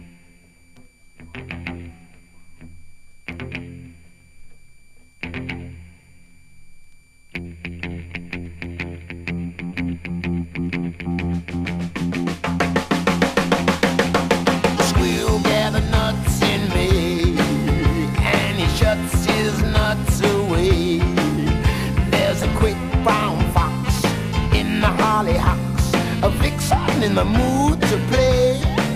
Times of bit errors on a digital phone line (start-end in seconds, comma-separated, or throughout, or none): none